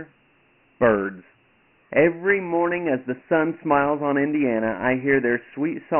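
From start to end, the speech is narrow and gritty, with hiss riding the words and nothing above 3 kHz: heavy Dialogic VOX ADPCM damage, fitting 4-bit coding at 6,000 samples a second.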